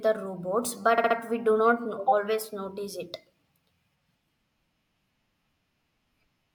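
Right after "the robots", at about 0.98 s, there's a stutter from repeated frames. A 64 ms chunk of the compressed stream gets played three extra times before things move on at about 1.17 s, just ahead of "we do not". A 64 ms block fits a pair of frames being resent or rewritten, so the decoder just replays them. The result is a quick, machine-gun repeat that stretches the clip by 192 ms.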